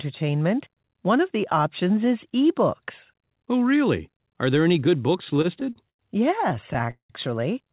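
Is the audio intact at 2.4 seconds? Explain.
Yes, the audio is intact at 2.4 seconds, with nothing broken or missing there beyond the ordinary narrowband sound of a telephone-grade call path that carries nothing above 4 kHz.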